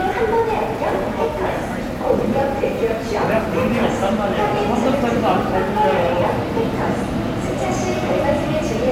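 From the very start and running the whole way through, there's a block size mismatch (truncated) going on. One stage is handing over longer blocks than the next one reads, so the tail of every block gets chopped off. That leaves a steady buzz at about 92 Hz, the block rate, sitting under everything. The discarded slice is tiny, so the pace stays at essentially 1.0x and the pitch sounds normal.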